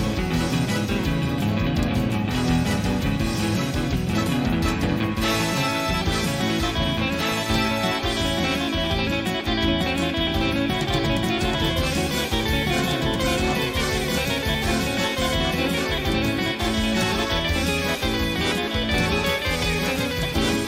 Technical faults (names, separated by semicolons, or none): doubled audio track